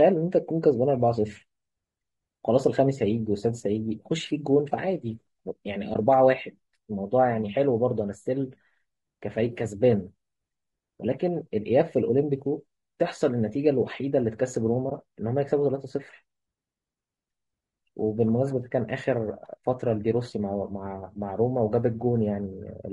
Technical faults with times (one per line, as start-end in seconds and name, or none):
0.00-22.92 low-delay AAC compression
5.93-5.96 AAC frame loss with muting
14.89-14.92 AAC frame loss with muting